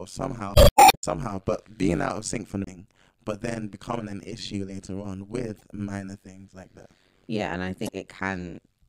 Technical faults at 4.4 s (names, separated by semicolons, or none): overlap-add ripple